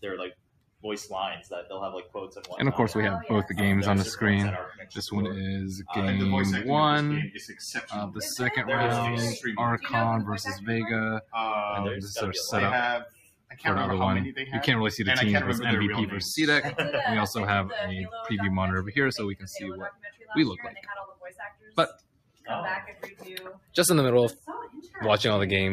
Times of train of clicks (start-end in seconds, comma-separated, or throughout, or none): none